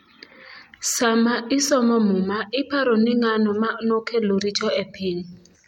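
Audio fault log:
No faults are audible anywhere in the speech.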